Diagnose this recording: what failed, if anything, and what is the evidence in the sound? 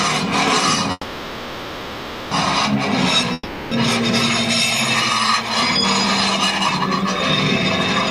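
A call audio freeze runs from 0.91 s to 2.33 s. The last sound is stretched into a fading buzz or hiss for about 1.4 s, ending in a brief silence. The audio then resumes exactly where it stopped, so nothing is lost but everything after it plays about 1.4 s later. The stage is the network. Packets were likely held up in transit, the receiver's jitter buffer emptied, and concealment filled the wait until delivery resumed.

A long network dropout follows at 3.33 s to 3.73 s. Again the last sound decays as a buzz or hiss, here lasting about 0.38 s, with only a momentary silence. When audio returns it has jumped ahead, and the roughly 0.38 s that should have played in that span is gone. This also sits at the network stage. The packets for that stretch were likely lost outright, so concealment covered the hole and playback skipped the missing section.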